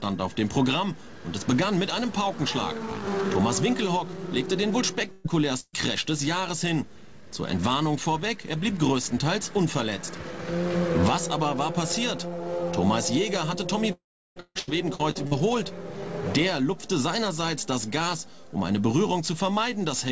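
At 5.12 s and again at 5.60 s there is a burst of packet loss, each lasting about 150 ms and each removing roughly 120 ms of the audio. In both cases the receiver fills the hole by extending the last sound it had, so a short held buzz or hiss stands in for the lost material. Playback then resumes a little further on. The first fill runs all the way to 5.27 s. The second fades out, with its last 30 ms going silent before the audio returns at 5.76 s. On a spectrogram each burst shows up as a smooth, frozen patch of repeated harmonics or flat noise, with a hard seam where normal detail picks up again.

From 13.93 s to 14.39 s a long network dropout breaks the sound. About 440 ms of the audio never arrives, most likely because the network stopped delivering packets for that stretch. For the first few tens of milliseconds the last sound carries on as a fading tail. After that, the final 360 ms or so is dead silence. 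On a waveform this appears as a brief decaying smear followed by a flat line, and on a spectrogram as a blank column across all frequencies.

Straight after the dropout, from 14.40 s to 15.34 s, the audio turns choppy. This is repeated packet loss producing a robotic sound: five separate gaps, the longest about 153 ms, with around 360 ms lost in total. Roughly 38% of that span is patched with extended copies of earlier sound. The spectrogram shows a stutter of short smeared blocks alternating with fragments of real detail, and the waveform looks chopped into uneven pieces. Throughout the clip the band stops at 8 kHz, which fits a G.722 call codec running at 64 kbps.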